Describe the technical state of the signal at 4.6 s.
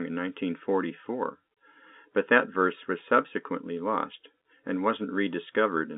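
At 4.6 s the speech is intact, with no fault present, only the narrow 200 Hz to 3.6 kHz band of the G.711 telephone coding it passes through.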